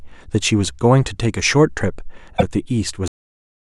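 A speech recording with three separate faults. At 0.65 s there is a block of digital silence: the signal drops to silence for about 1.3 ms and then resumes, with no fade at either edge. At that length it is heard as a single tick, not a gap. This fits a 64-sample block that the program failed to fill in time. It differs from a compressed-stream error because the sound does not change. From 2.37 to 2.43 s, roughly 64 ms, there is damaged data in the compressed stream. Here the decoder misreads corrupted frames and loses sync. The result is a short disturbance while the decoder searches for the next valid frame header. A silence dropout produces clean silence. This event instead comes from the decoder losing its place in the stream. The final fault is a cut-off end at 3.08 s. The audio stops mid-sound and falls straight to digital silence for the remaining half second, with no decay. The last buffers were never written. 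It can be told apart from the earlier silence block because the sound never comes back.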